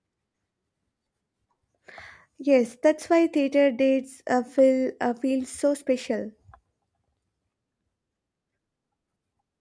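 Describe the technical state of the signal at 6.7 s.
At 6.7 s the signal is intact, with no audible fault at that point in the speech.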